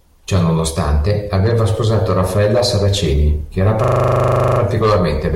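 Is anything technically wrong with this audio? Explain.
Yes. A system hang loop starts at 3.84 s, just after "che era", and runs to 4.6 s. The system stalled while the audio hardware kept replaying one 40 ms buffer, 19 times over. It sounds like a rapid stutter at 25 Hz.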